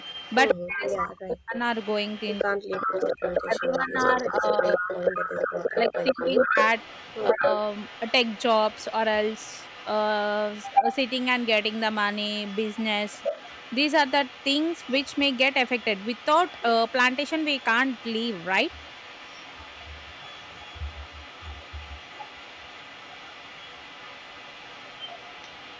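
From the start to 1.11 s, a delayed copy of the speech trails the talker by 131 ms. It is strong, about 5 dB below the speech. This is echo leak. The likely cause is a loudspeaker on the far end whose echo canceller let some of its microphone pickup pass back.

From 0.53 to 1.56 s, the talker's level collapses in pieces, by as much as 40 dB or so. This is speech suppressed in double talk. Both sides were talking. The echo canceller likely could not tell the talker from the echo, so it turned both down.

The echo leak returns at 1.75 s and runs to the end. It stays at 131 ms but is weaker, about 10 dB below the speech.

The double-talk suppression comes back from 2.44 to 6.57 s. There the speech dips and breaks up for about three seconds in total, by up to roughly 30 dB.

A last short dip of about 20 dB lasts a tenth of a second, from 7.33 to 7.43 s.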